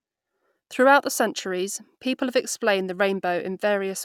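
No technical faults can be heard anywhere in this speech recording; the signal stays steady and intact throughout.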